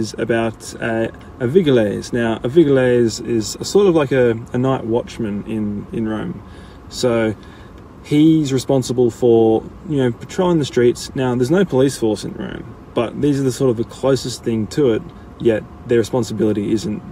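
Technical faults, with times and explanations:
No technical faults are audible anywhere in the recording.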